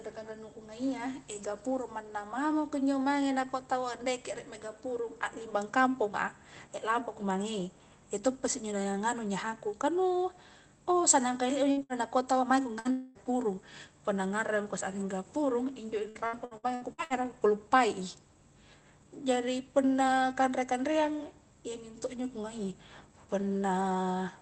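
Right after "kah nu oh sannang", at 11.71 s and again at 11.83 s, the sound briefly smears into a short held continuation of the last sound that fades, and then jumps ahead. Each is a burst of packet loss of under a tenth of a second, with about 60 ms of audio lost and the gap patched by stretching the last sound. The same happens at 12.79 s, just after "taua maeko".

From 12.91 to 13.18 s, immediately following that, a longer fading continuation of the last sound runs for about a quarter of a second without dropping to silence before the audio resumes further on. This is likely a long network dropout, with the receiver extending the last sound across the missing stretch.

Between 16.09 and 17.13 s the sound turns choppy. Seven short holes, none longer than about 60 ms, each get filled with continued sound, so roughly 40% of that second is patched rather than real audio. This is repeated packet loss.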